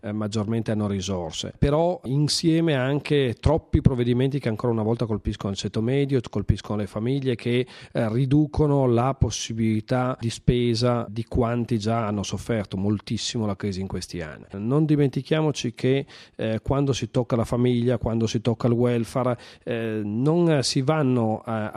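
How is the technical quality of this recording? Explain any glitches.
No glitches or faults detected.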